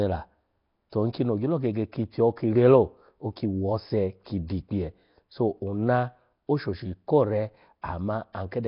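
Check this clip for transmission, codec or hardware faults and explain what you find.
Heavy codec damage runs through the whole clip. The likely cause is Nellymoser compression, which codes short blocks at a fixed two bits per sample, consistent with about 22 kbps. Weak bands receive no bits and get noise fill instead. The speech stops at 5.3 kHz and sounds rough, hissy and smeared, almost underwater.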